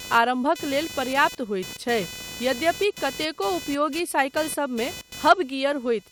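Computer activity noise runs through the whole recording, a buzzing, chirping layer pulsing at roughly 500 Hz and sitting only about 15 dB below the speech. Changing load in the computer's processor, graphics hardware or mouse circuitry shifts the ground that the audio input shares with them, and that disturbance lands directly in the signal. Its rasp rises and falls with what the machine is doing rather than with the talking.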